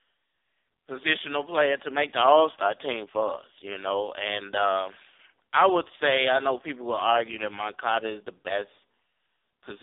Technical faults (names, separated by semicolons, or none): AMR narrowband mobile codec